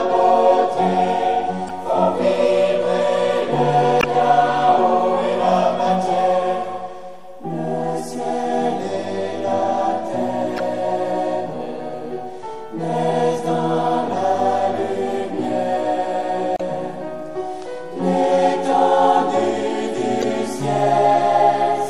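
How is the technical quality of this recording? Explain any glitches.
The quality is compromised in two ways: there's audible compression damage throughout, plus five short glitches from corrupted data.

The whole clip has plainly audible MP3 compression artefacts, likely from an encode at around 64 kbps. At that rate the encoder runs short of bits and drops weaker frequency detail frame to frame, which gives the sound a watery, swirly texture and smeared attacks.

Then there's damaged data in the compressed stream at 1.67–1.71 s, 3.99–4.04 s, 10.57–10.60 s, 16.54–16.61 s and 20.20–20.24 s, each lasting between about 30 and 70 ms. Bad bytes knock the decoder out of sync, so it misreads frames until it finds a valid header again, leaving a brief disruption each time.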